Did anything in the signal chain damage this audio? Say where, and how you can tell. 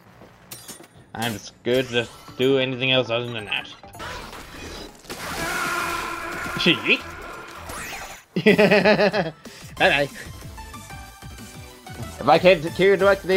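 No, nothing in the signal chain damaged this audio at any point I can hear.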